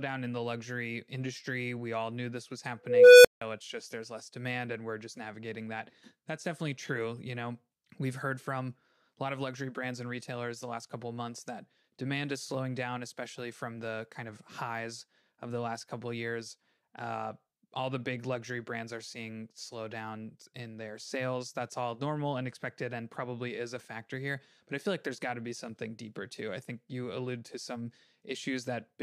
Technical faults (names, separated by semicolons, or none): unstable filter